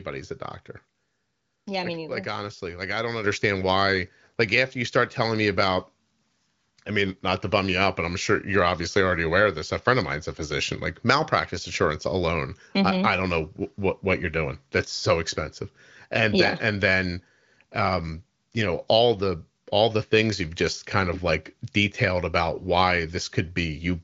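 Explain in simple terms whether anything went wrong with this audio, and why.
One thing goes wrong: at 3.24 s the microphone volume steps up. The call software judged the microphone too quiet and raised its input level in a single jump. The speech and the background noise get louder together at that instant and stay louder, so it sounds like someone turned a knob rather than the talker speaking up. The HD Voice (AMR wideband) phone codec carrying the call cuts the sound off above about 7.6 kHz.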